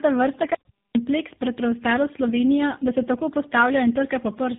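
It's a speech clip, and the whole thing has tandem speech coding: two speech codecs run back to back, the second re-encoding the first one's damage. It sounds rough, muffled and warbly, nothing above 3.7 kHz, consistent with GSM full rate feeding AMR-NB at 7.95 kbit/s.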